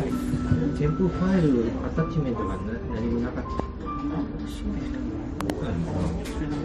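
A sudden voltage step, likely from a plug, switch or static discharge, enters the signal at 3.60 s and again from 5.41 to 5.52 s. Each is a loud pop riding over the sound: a single sharp pop about 15 dB above it, then a double pop about 20 dB above.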